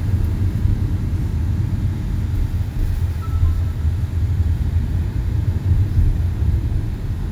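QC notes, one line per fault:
No faults found. Nothing in this recording of sounds calls for a QC note.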